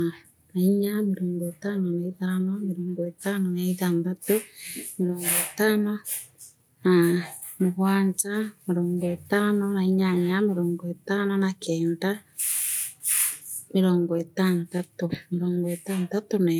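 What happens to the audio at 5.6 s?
Nothing goes wrong at 5.6 s; the speech carries on intact through that moment, with no dropout, click or distortion.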